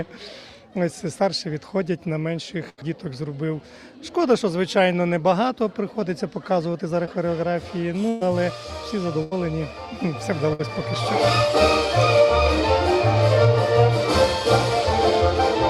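A run of packets failed to arrive in time at 2.69 to 2.80 s, and the receiver covered the hole by extending the last sound it had and fading it down. This is a burst of packet loss: about 80 ms of audio never plays. The audio then resumes further on, so the sound smears into a dying tail and jumps ahead. The same burst packet loss returns at 8.09 to 8.23 s, the longest at about 120 ms, then at 9.23 to 9.33 s (about 80 ms) and 10.53 to 10.61 s (about 60 ms).

Between these, at 7.06 to 7.09 s, a much smaller piece of about 20 ms missed the decoder. The receiver patched it by continuing the preceding sound for roughly 15 ms and blending back into the real signal. This short concealed packet loss is heard only as a brief smear or wobble, and any very short sound in that spot can drop out entirely.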